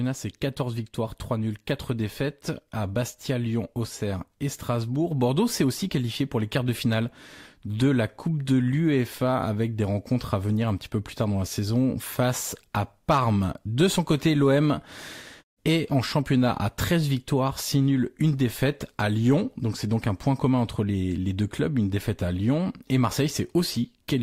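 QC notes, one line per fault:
No technical faults are present; the speech signal stays intact, with nothing broken or distorted.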